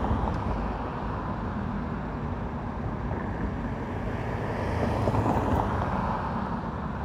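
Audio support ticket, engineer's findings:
No faults found in the audio; nothing to attribute to any component.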